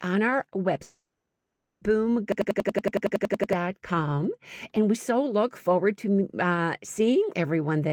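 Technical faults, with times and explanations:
0.83 to 1.83 s, long network dropout: right after "on our", about a second of audio likely never arrived, so the receiver stretched the last sound into a fading buzz that gives way to silence for most of the gap. The sound then resumes with that portion missing.
2.32 to 3.53 s, system hang loop: the system froze while the sound hardware kept replaying one ring buffer, so a single 93 ms fragment repeats 13 times at about 10.8 Hz. That produces a machine-gun stutter, which fits a 4096-sample buffer, and roughly a second of audio is lost.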